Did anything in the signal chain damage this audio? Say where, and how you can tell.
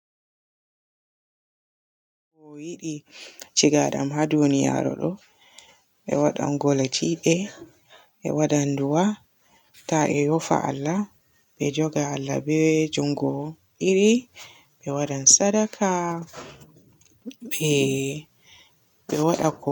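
No, nothing in the signal chain damaged this speech. The level rises in a smooth fade-in from around two and a half seconds, reaching full level by 3.63 s with no click or hard edge, as an editor would apply it.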